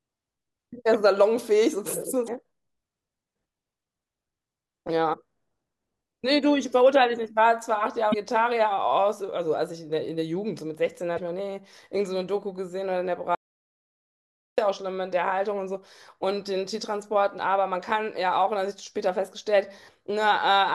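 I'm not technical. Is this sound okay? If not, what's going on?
No. Four times, at about 2.25–2.29, 5.10–5.14, 8.10–8.14 and 11.15–11.19 seconds, the speech gives a short chirp or blip lasting a few hundredths of a second. This is damaged data in a compressed stream: the player hits broken bits of the file and briefly loses its place.

From 13.35 to 14.58 seconds the speech stops completely for about 1.2 seconds. This is an audio dropout to silence, likely caused by the input being lost for a moment. Unlike the chirps, it makes no noise, not even background hiss, and that stretch of speech is gone.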